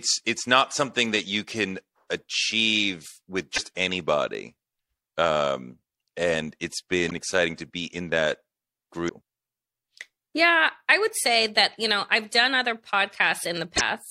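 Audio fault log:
3.54 s, 7.07 s, 9.05 s and 13.73 s: damaged data in a compressed stream. Four brief glitches, about 50 to 80 ms each: the first right after "you can achieve with", the second between "and it's" and "exciting to be in". Corrupted bytes made the decoder misread frames and lose sync until it found the next valid header. On a spectrogram each appears as a narrow vertical smear of broadband or tonal garbage. The waveform shows a break in the speech envelope.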